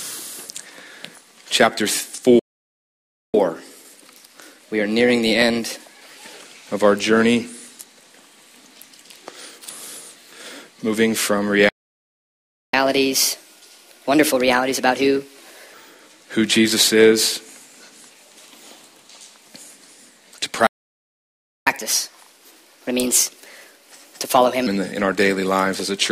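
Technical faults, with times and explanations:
2.39 to 3.34 s, playback stall: The sound cuts out mid-flow for about 0.95 s. It then resumes. The likely cause is the player running dry of data or its thread being blocked.
3.34 to 6.34 s, catch-up at higher speed: Playback runs at 1.1 times normal speed for 3 s. Pitch rises by about one and a half semitones. The player is resampling its backlog to regain lost time. Then both settle back.
11.69 to 12.74 s, playback stall: Output goes silent for about 1.04 s mid-flow, then carries on. This likely comes from a starved buffer or a blocked playback thread.
12.74 to 15.74 s, catch-up at higher speed: Speed jumps to 1.25 times normal for 3 s. Pitch rises by about four semitones. The player is resampling to win back the gap. Then it drops to normal.
20.67 to 21.67 s, playback stall: The sound stops for about 1.0 s and then picks up again. The likely cause is again data running out or the thread stalling.
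21.67 to 24.67 s, catch-up at higher speed: Playback speeds up to 1.25 times for 3 s. Pitch is raised by about four semitones. The backlog is being played off faster by resampling. Normal speed and pitch return afterwards.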